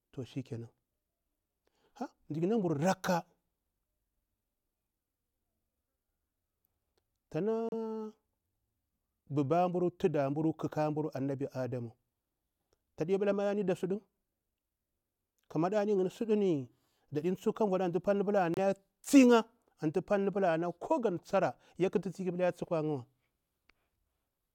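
A Bluetooth stall, likely from interference delaying packets until the headphones' buffer emptied, halts the speech at 7.69 to 7.73 s with about 33 ms of silence, then again at 18.54 to 18.59 s, between "vuɗa antu palni pula" and "ya tsi ya antu", with about 29 ms.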